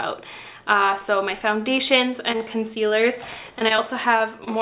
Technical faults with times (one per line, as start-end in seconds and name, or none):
2.32-2.93 repeated packet loss (robotic sound)
3.59-3.80 short concealed packet loss
4.18-4.22 short concealed packet loss
4.44-4.48 short stall from a late packet